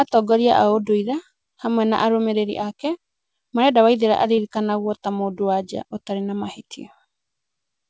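At 4.36 to 4.39 s the speech smears briefly: a short concealed packet loss, where a few hundredths of a second of audio arrived too late. The receiver extended the preceding sound to fill the hole and blended back into the real audio. A plain dropout would leave a silent gap or a hard click instead.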